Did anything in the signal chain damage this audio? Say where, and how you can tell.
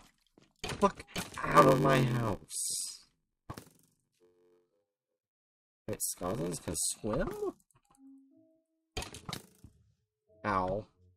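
Yes: from 1.51 to 6.93 s, a 93.8 Hz buzz appears and the sound runs at 0.861 speed with timbre intact. This is a block size mismatch (padded) at the buffer stage, with short writes zero-filled into reads that fit a 512-sample buffer.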